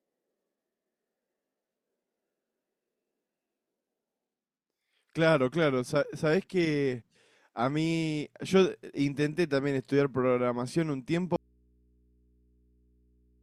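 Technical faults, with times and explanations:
11.36 s to the end: audio dropout to a faint residue. The speech cuts off abruptly and never returns, leaving only low mains hum roughly 40 dB down. A likely open but still-live input, unlike a pause or fade, which would be gradual or silent.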